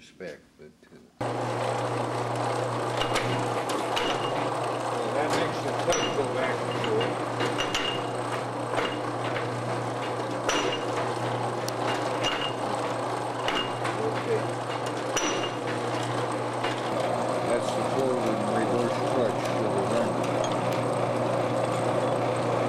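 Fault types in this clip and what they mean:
Electrical switching spike: two sharp snaps sit on top of the sound, one at 11.69 s and one at 20.73 s. Each lasts only a millisecond or two and peaks at roughly -10 dBFS. They likely come from a nearby switch, motor or static discharge arcing and coupling into the audio line. On a waveform each appears as a single needle-thin excursion. On a spectrogram each is a narrow vertical stripe spanning the full frequency range.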